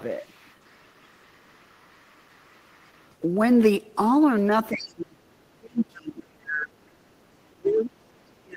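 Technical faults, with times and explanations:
0.21 to 3.09 s: other side's voice leaking through. A faint second voice sits far beneath the speech, very quiet. Likely an echo canceller leaving loudspeaker sound in the microphone.
4.72 to 5.18 s, 5.57 to 6.84 s, 7.37 s to the end: speech suppressed in double talk. The speech drops sharply, by roughly 35 dB at worst. Likely the canceller turning everything down while both sides talked.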